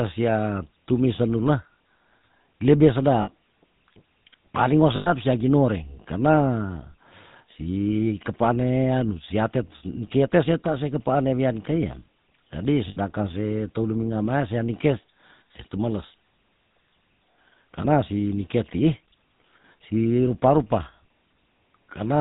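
Throughout, the speech carries the buzzy, gravelly roughness of the GSM full-rate codec, consistent with its 13 kbps coding. The vocal tract is modelled and driven by a sparse pulse excitation, and everything above 4 kHz is gone, so the damage is plainly audible.

Lost GSM frames occur at 3.22 to 3.30 s (60 ms), at 4.96 to 5.12 s (100 ms) between "paling wo" and "sia ginoreng", at 12.88 to 12.97 s (80 ms) between "wian kei ya jadi" and "se teu luminga mea", and at 17.82 to 17.86 s (20 ms) just before "si nike tii". In each gap the last good frame's settings are repeated, giving a brief rough, metallic ring. The durations fit runs of 20 ms frames.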